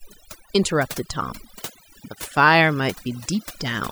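Overdone noise removal runs through the whole speech clip: an over-aggressive noise reducer has pushed individual frequency bands nearly to silence wherever they sat close to its noise estimate, taking quiet voice detail too. The background becomes near-silent with twinkling specks. A spectrogram shows scattered isolated dots between patchy, hollowed-out speech harmonics.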